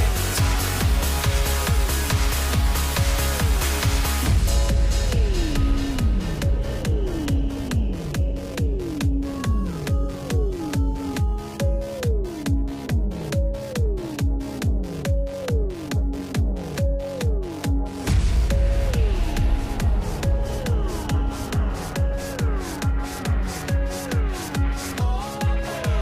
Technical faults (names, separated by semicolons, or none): none